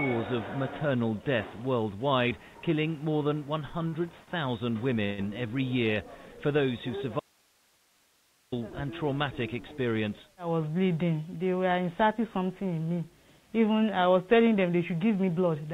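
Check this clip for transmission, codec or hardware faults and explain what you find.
Four faults appear in the clip, three of them from the network side of a call. The whole clip is band-limited to nothing above 4 kHz, which fits a G.711 mu-law path at 64 kbps. That path is not itself a fault.

Short stalls from late packets occur at 3.88–3.94 s and 4.24–4.29 s. Each time a packet arrived late, the jitter buffer emptied and the receiver held the last sound for about 43 ms and then 29 ms before resuming where it left off. Nothing is lost, but the sound hangs briefly with a faint buzz. On a spectrogram each shows as a short smear of horizontal, unchanging bands. The waveform shows a brief repeated, periodic stretch.

A call audio freeze runs from 5.05 to 5.20 s. The last sound is carried on for about 129 ms as a fading buzz rather than silence, after which the audio picks up without skipping ahead, so the timeline is pushed later. 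The likely cause is packets held up in transit until the jitter buffer ran dry. A spectrogram shows frozen, decaying harmonic lines. The waveform shows a tapering repetitive segment.

An audio dropout to a faint residue spans 7.20–8.52 s, about 1.3 s. The signal cuts off abruptly, and only hiss about 40 dB below the normal level remains until it returns just as suddenly. This is likely a loss of the wanted signal while the downstream path stayed live. On a spectrogram it appears as a sharp-edged block of faint, even broadband noise. The waveform collapses to a thin band with vertical edges.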